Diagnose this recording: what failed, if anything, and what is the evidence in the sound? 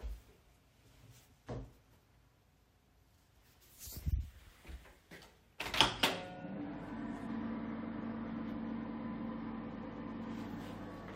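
Codec stage: damaged data in the compressed stream causes a blip at 4.38 s as the decoder misreads a frame. It shows as a thin vertical spectrogram smear.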